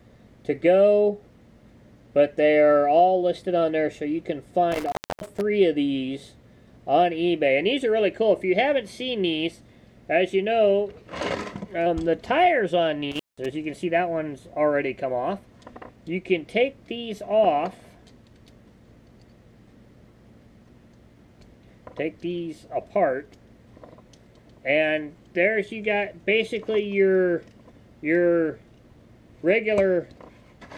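At 4.72 to 5.41 s and 13.11 to 13.46 s, an intermittent contact briefly opens the line, for 0.29 s and 0.18 s. Crackle at the edges distinguishes it from clean digital dropouts.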